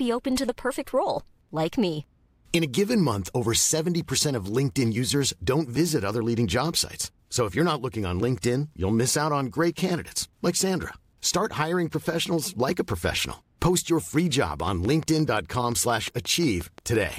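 A repeated pulse, likely from interference by nearby equipment or a faulty connection or power supply, gets into the signal from 14.68 s to 17.14 s and produces a train of clicks. The clicks arrive at a regular pace of about 5.7 per second, roughly fifteen in all, each with much the same sharp shape. They peak about 5 dB above the speech, so they are heard as steady ticking over the talking and in the pauses between.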